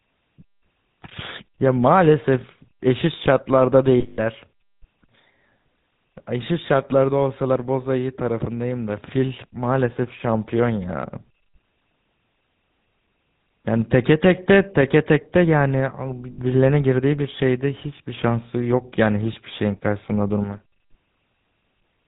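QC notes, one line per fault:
Throughout: GSM full-rate codec. The speech has passed through the original GSM coder, which fits a 13 kbps channel. It rebuilds the voice from a vocal-tract model driven by sparse, regular pulses and cuts everything above 4 kHz. That leaves a plainly audible buzzy, gravelly roughness and a dull, band-limited top end.
4.00 to 4.19 s and 16.32 to 16.39 s: lost GSM frames. Corrupted frames were covered by repeating the last good frame's settings, for 180 ms and then 60 ms. Each gap becomes a held, rough metallic ring.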